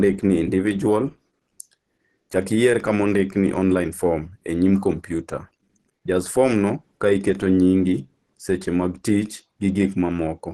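Throughout the speech, the sound is plainly degraded, with nothing above 12.1 kHz and a muffled, hoarse, grainy texture rather than the swirling, watery holes of MP3. This is likely Opus compression, and it points to about 16 kbps in its hybrid speech mode.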